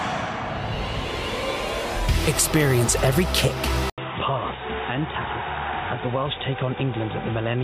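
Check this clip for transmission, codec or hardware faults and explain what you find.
One fault is present. At 3.90 s the sound cuts out for about 80 ms and resumes noticeably duller, with nothing above 3.8 kHz, a few decibels quieter, and with a faint new background hiss, until the end. This is most likely an input switched to a poorer device, such as a headset in call mode. A codec bandwidth drop would narrow the band alone, but here the level, the noise floor and the tone also change at once, after a brief gap.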